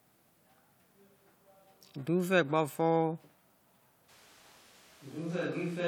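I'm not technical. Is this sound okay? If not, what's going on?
No. From 4.1 s to the end, the voice suddenly turns hollow, roomy and quieter. That is a switch to a distant microphone, likely because the close one dropped out.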